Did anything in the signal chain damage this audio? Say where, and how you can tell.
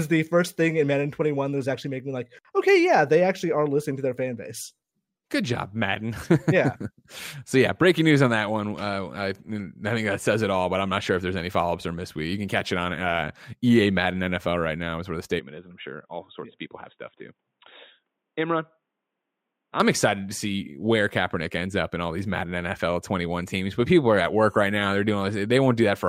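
Yes. From 15.39 to 19.80 s the input likely switched to a poorer device: the speech turns boxy, with nothing above 3.8 kHz, drops about 5 dB, and gains a faint new noise floor roughly 55 dB down, switching with no gap, then clears again.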